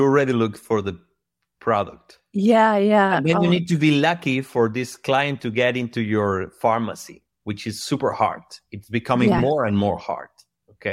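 At 5.43 s, after "lucky for this client", and from 9.38 to 9.40 s, after "becoming yeah", lost LE Audio frames leave 7.5 and 15 ms holes. The decoder patches them with a recycled spectrum with random signs, giving a brief noisy smear. On the spectrogram each shows as a blurred vertical strip, and on the waveform as a short patch of hashy texture.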